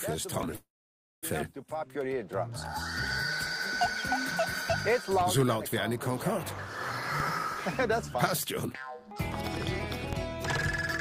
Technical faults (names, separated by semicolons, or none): DC step; call audio freeze; jitter buffer speed-up